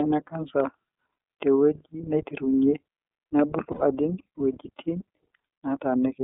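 Throughout, the speech passes through the iLBC codec, a narrowband coder that treats each frame on its own and, at roughly 13 kbps, fits 30 ms frames. Only about 250 Hz to 3.5 kHz survives, leaving the speech thin, plainly rough and somewhat synthetic.

From 3.72 to 3.82 s, lost iLBC frames cut about 90 ms, which fits three missing 30 ms frames. The decoder fills the hole by repeating the last pitch cycle blended with noise, heard as a brief held, buzzy vowel before normal sound returns immediately.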